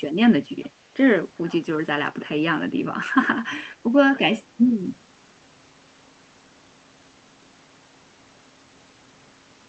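It's a speech clip, and there's one small echo leak to flag. From 0.63 to 0.67 s, a faint delayed copy of the talker comes back about 407 ms behind the original, sitting roughly 35 dB down, so it's a brief, quiet scrap rather than a full repeat. The likely cause is a far end on a loudspeaker whose echo canceller didn't fully scrub what its mic picked up, so a bit got sent back down the line.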